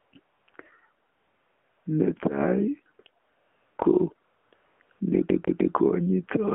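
AMR narrowband mobile codec, throughout: the speech is confined to roughly 200 Hz to 3.4 kHz and sounds buzzy and synthetic. Each 20 ms frame is rebuilt from a vocal-tract model excited by sparse pulses, and the plainly audible damage fits a low rate near 7.4 kbps.

AMR comfort noise, nine times between 0.00 and 5.00 s, lasting from 40 ms up to 760 ms, with the longest at 1.10 to 1.86 s. Wherever speech frames stopped, the receiver substituted smooth synthetic hiss, which switches in and out in place of the real background.

CD stuck on one turn, 5.29 to 5.75 s: a 152 ms slice of audio plays three times in a row, with a brief mute at each jump back. This gives the fast, even stutter of a disc whose laser keeps skipping back one track at the same spot.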